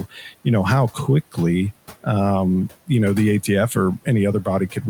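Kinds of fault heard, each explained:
Noise suppressor artifacts: the background sinks by about 17 dB between phrases and swells back under speech, because the suppressor turns down bands it judges to be steady noise.
Speech cut by the noise suppressor: the opening before "know how" and the final moment sound faint and swallowed, dipping about 10 to 11 dB, because the suppressor mistook that speech for noise.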